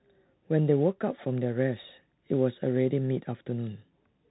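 From start to finish the speech sounds boxed-in and narrow, with nothing above 4 kHz, s sounds scratchy, a granular hiss underneath, and roughness on loud bright passages. This is the Bluetooth CVSD headset codec, its one-bit adaptive steps lagging sharp changes, which fits a 64 kbps link.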